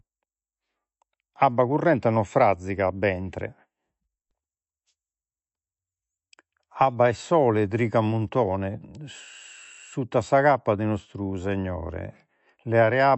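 From start to finish the speech sounds dull and watery, with a swirling texture and nothing audible above 8 kHz. The likely cause is MP3 compression. Short of bits, the encoder cut the treble at a fixed 8 kHz and zeroed weaker frequency lines, which flicker on and off between frames and produce the swirl. The damage is plainly audible, which fits a low bitrate of around 48 kbps.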